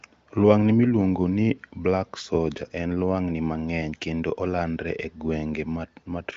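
No technical faults can be heard in this speech clip. It carries the sound of an AMR wideband (HD Voice) codec at what sounds like one of its higher rates: the top end stops at about 7.6 kHz, and coding damage is faint at most.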